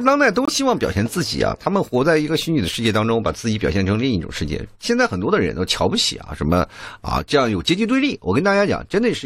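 A speech clip with one clear fault, a corrupt frame muted. At 0.45 s the sound cuts out abruptly. A silent hole follows, ending at 0.49 s, about 42 ms long. That length fits two compressed frames of roughly 21 ms each. Bits in those frames were damaged. The decoder rejected them, and the player filled the gap with silence. Timing is preserved, so the speech resumes on schedule after the dropout.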